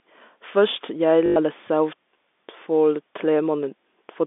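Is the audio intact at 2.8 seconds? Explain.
Yes, at 2.8 seconds the speech runs on without any fault, heard through the narrow band of G.711 telephone coding.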